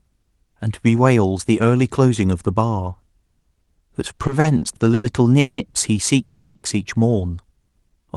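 From 4.17 to 5.60 s the speech hits repeated stalls, a proper stutter. Nine times in that stretch the delivery catches and hangs, with the last sound held and carried forward while it waits, the longest hang about 180 ms. Together they fill 440 ms, close to a third of that span. Packets were arriving late or slower than playback, so the jitter buffer kept draining. Nothing is lost, but it drags and judders.

At 6.22 s there's a call audio freeze lasting until 6.57 s. The sound at that point gets stretched out as a fading buzzy continuation for 330 ms rather than dropping to silence, and then the speech picks up exactly where it left off. The likely cause is packets held up in transit, emptying the buffer and pushing the playout delay out by the same 330 ms. The result is a gap inserted into the audio rather than anything cut.

Right at the end, 7.52 to 8.07 s, you get a jitter buffer slow-down. 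The receiver was rebuilding its reserve by repeating single pitch periods and small slices of pause, adding 70 ms. Playback runs at about 89% speed with the pitch unchanged, so the sounds come out drawn out and a bit lazy, maybe with a faint warble. Throughout, the Opus call path tops out around 12 kHz, which you can hear as a slightly trimmed top end.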